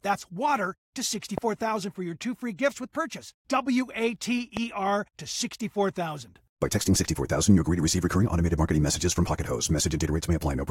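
A sudden voltage spike, likely from a plug, switch, static discharge or driver glitch, got into the signal path twice, producing a loud pop each time: first from 1.38 to 1.40 s, then from 4.57 to 4.59 s. Each is a single short pulse, around 15 dB louder than the surrounding audio, heard as a sharp crack or thump riding on top while the underlying sound continues uninterrupted beneath it.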